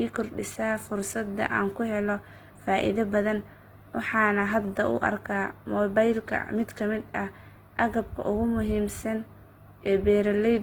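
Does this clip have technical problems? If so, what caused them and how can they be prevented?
Yes. The speech was likely squeezed through Opus compression at a low bitrate; the damage is plainly audible and fits a rate around 16 kbps, with the encoder in its music (CELT) mode. With too few bits, CELT keeps each band's energy but refills missing detail by folding lower bands or injecting noise, so throughout the clip the voice sounds rough, grainy and noisy rather than swirly, even though the bandwidth stays full, reaching about 20 kHz. Encoding speech at a higher bitrate, or letting Opus use its speech-oriented mode, would prevent this.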